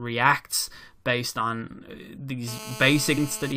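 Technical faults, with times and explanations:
0.52 s and 3.17 s, damaged data in a compressed stream: two quick glitches, the first just before "based on uh". Bad bytes in the stream make the decoder misread those frames and lose sync, so it hunts for the next frame header.
2.48–3.52 s, GSM phone buzz: a hard, raspy 217 Hz buzz full of harmonics comes in after "based on uh", sitting about 14 dB below the speech. It stays steady, which fits a nearby 2G phone on a call whose radio bursts the audio circuitry is rectifying.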